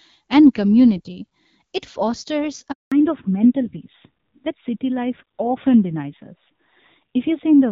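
At 2.72 s the call is handed from one network to another, and no speech frames arrive while the link switches over. This handover gap leaves the speech fading out almost at once and a dead silence of 200 ms, until 2.92 s, when the new link starts carrying audio again. Whatever was said inside that window is simply missing rather than muffled or garbled.

When sound returns at 2.92 s, the call has fallen back from HD Voice to an older narrowband codec, and it stays there to the end of the clip. Before the switch the wideband coding, with its light artefacts, keeps the upper detail and airiness that point to a rate around 12.65 kbit/s. After the fallback to narrowband nothing above 4 kHz survives. The speech turns duller and rougher, with a coarse edge that fits a low-rate mode near 7.4 kbit/s.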